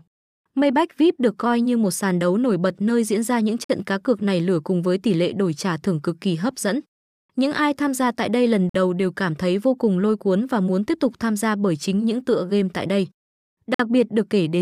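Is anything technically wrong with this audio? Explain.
Yes. There are gaps between chunks: 50 ms silences at 3.64 s (after "nơi diễn ra những"), 8.69 s (before "đầu đều cảm thấy") and 13.74 s, spaced 5 s apart. Each join inserts dead air without losing speech, showing as flat waveform and a blank vertical strip with sharp edges.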